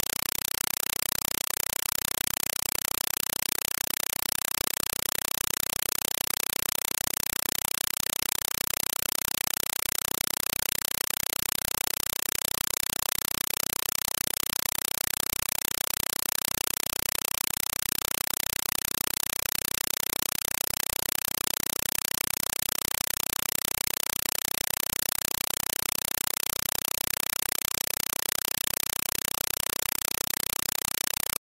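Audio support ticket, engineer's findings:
Compressed stream played as audio, whole clip: loud chattering static where the sound should be, about 4 ms noise bursts with silence between, ticking along at 31.25 per second. Probably the S/PDIF or HDMI sink treating an AC-3 bitstream as plain PCM instead of decoding it. Each Dolby frame comes out as a noise burst plus zero padding. The burst density fits a roughly 192 kbps stream.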